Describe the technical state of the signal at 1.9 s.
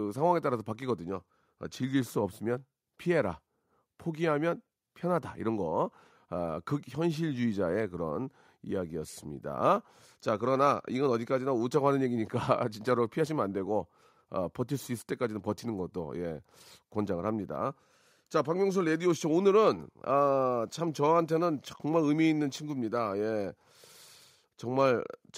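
At 1.9 s the speech signal is intact, with no dropout, clipping, distortion or other fault at that moment.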